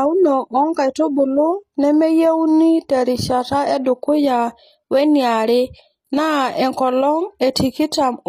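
HE-AAC compression at a low bitrate, likely around 24 kbps, runs throughout. The codec keeps only the lower spectrum and synthesises the treble by copying bands upward, so s sounds turn gritty and lispy, and nothing survives above 14.9 kHz.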